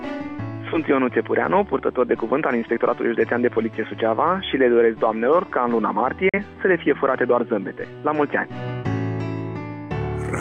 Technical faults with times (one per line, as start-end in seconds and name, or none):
6.29-6.39 digital broadcast dropout